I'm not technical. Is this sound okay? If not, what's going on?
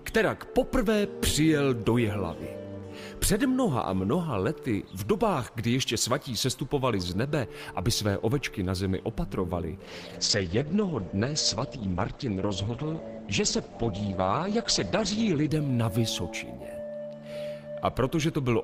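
No. From about 9.85 to 15.57 seconds there is a call bitrate drop: the connection's capacity fell, so the audio was squeezed into far less data. The sound turns coarse and muffled, losing its brightness above about 8 kHz, until quality recovers.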